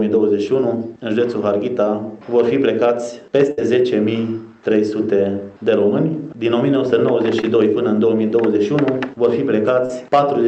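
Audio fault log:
3.51 to 3.59 s, burst of packet loss: the sound stretches into a held, fading tail, then jumps ahead. About 60 ms never arrived, and the receiver extended the last sound across the gap.
7.41 to 7.45 s and 9.86 to 9.91 s, short concealed packet loss: brief smears as the sound wobbles, then rejoins. About 20 ms and 40 ms went missing, each patched by continuing the preceding sound and then blending back.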